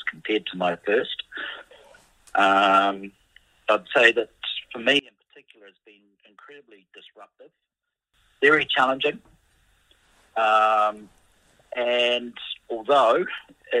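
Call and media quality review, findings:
One channel inverted, 4.99–8.14 s: summed level drops about 29 dB, centred content nearly gone, faint residue left. Likely cause: polarity flip on one stereo leg, so shared signal cancels in mono fold-down, leaving only inter-channel difference.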